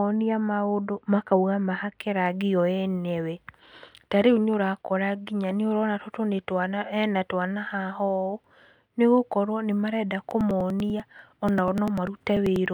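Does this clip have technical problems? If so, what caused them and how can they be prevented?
Yes. From 0.0 to 2.0 s, up to the words "rangi o enyewe", the speech has de-emphasis applied wrongly: a treble cut meant to undo pre-emphasis was used on audio that didn't need it. Highs fall smoothly to about 14 dB down at 10 kHz relative to 1 kHz, so the opening sounds dull and muffled. On a spectrogram the upper bands fade gradually with height. Keeping de-emphasis off unless the source is known to be pre-emphasized prevents this.

From 10.31 to 12.66 s there are periodic USB or driver dropouts. Every 0.098 s, roughly ten times a second and about thirty times in all, a few milliseconds of audio are skipped. Something blocking the USB bus or the audio driver at a fixed interval would cause this. Each loss is a regular tick heard over the speech. On the waveform these appear as abrupt jumps with no silent gap. 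On a spectrogram they show as evenly spaced thin vertical lines. Finding and stopping the periodic background task, or using a larger buffer, prevents these dropouts.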